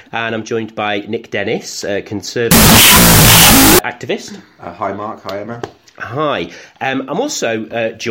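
From 2.51 to 3.79 s there is a wrong sample width fault. The 16-bit data are read as unsigned 8-bit. Half the bytes become loud noise. The rest carry a distorted trace of the sound, playing at half speed and lower pitch.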